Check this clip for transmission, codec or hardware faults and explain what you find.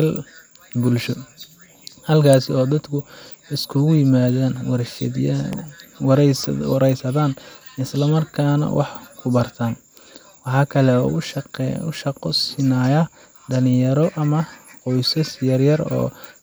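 Two sharp snaps stand out in the speech. An electrical switching spike occurs at 2.33 s and again at 5.53 s, likely from a nearby switch or discharge arcing into the audio line. Each is an instant snap laid over the speech, the first reaching about -5 dBFS and the second somewhat quieter at about -10 dBFS.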